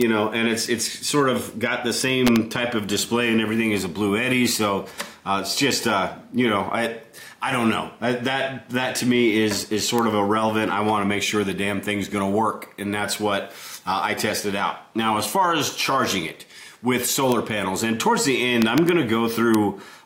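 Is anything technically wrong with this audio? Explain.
Yes. Integer overflow cracks at 0.01, 2.27 to 2.36, 9.99, 17.32, 18.62 to 18.89 and 19.55 s. Peaks reaching or slightly exceeding full scale, by about 1 dB at most, wrap to the opposite sign instead of being limited, producing sharp, violent cracks harsher than clipping.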